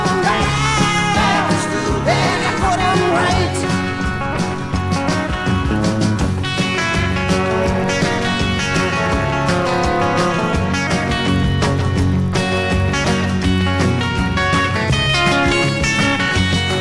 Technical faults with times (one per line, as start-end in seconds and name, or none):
0.00-16.81 resampler restarted on every block